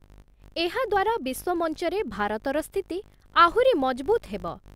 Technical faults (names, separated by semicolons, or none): filter restarted on every block